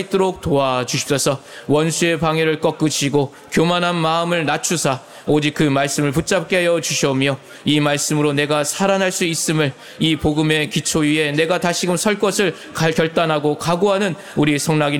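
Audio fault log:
No faults detected in this recording.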